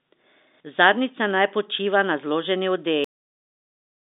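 At 3.04 s the speech just stops dead, mid-sound, and the clip sits in flat digital silence for the last second or so. That's a cut-off end: the final stretch of audio never made it out of the buffers, so there's no natural decay or trailing breath, only an abrupt drop to silence. It's easy to spot against the narrow telephone-band sound, which has nothing above about 3.8 kHz, because the silence is completely empty.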